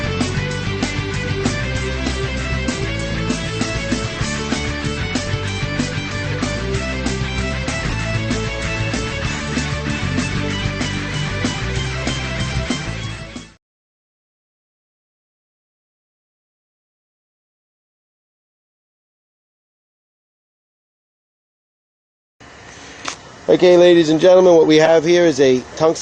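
Corrupt frame decoded at 4.19–4.22 s, 5.23–5.26 s, 6.31–6.34 s, 7.89–7.94 s and 24.85–24.89 s: damaged compressed data was decoded anyway, spraying misplaced energy into short chirps or noise bursts across a couple of frames, the last being the loudest.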